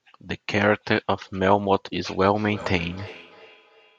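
Feedback echo between two devices affects this speech clip from 2.35 s to the end, where the sound returns as a delayed copy roughly every 300 ms, peaking at about 19 dB below the direct speech. Two devices in the same room are on one call: one plays out what the other's microphone captured, and that microphone picks the playback up again. Each device's echo canceller only removes its own output, so the loop goes uncancelled.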